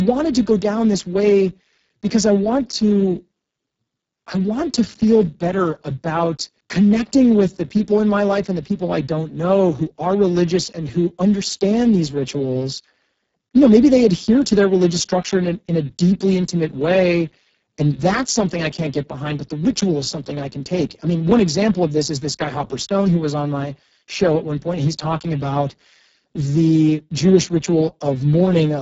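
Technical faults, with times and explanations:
Throughout: Speex codec, heavily degraded. The speech sounds hoarse and noisy, which fits Speex running at a very low setting of around 6 kbps. At that rate this CELP coder has too few bits to model the excitation, so the voice's natural buzz turns into coarse, noisy pulses. Nothing is present above 7.7 kHz, and the top band is a shaped, hiss-like fill with no real detail.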